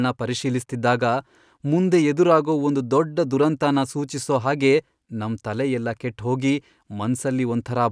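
Nothing in this bit of speech trips any alarm, since there's no fault to point to anywhere along the way.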